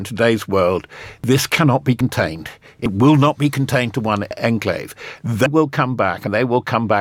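A sudden jump forward in the speech lands at 1.24 s (between "today's world" and "cannot be"), 2.01 s (after "cannot be"), 2.86 s, 4.31 s (after "be contained to one"), 5.46 s and 6.27 s. There is no gap, just a skip. Each is likely a dropped buffer (overrun): samples were overwritten before being read, so roughly 40 ms went missing at most points and around 150 ms at 4.31 s and 5.46 s.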